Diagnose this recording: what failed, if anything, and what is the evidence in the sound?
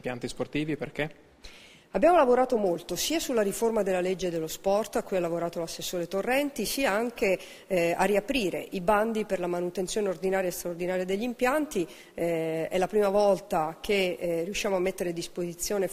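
From 2.66 s to the end, the audio turns thin, bright and sibilant, with treble standing about 8 dB above 1 kHz at 10 kHz. This is pre-emphasis left on: the track carries a treble boost that the playback or decoding stage was meant to undo with a matching de-emphasis cut, and that cut is missing. Unlike a general EQ or microphone brightness, the lift is a smooth shelf fitting the CD 50/15 µs curve.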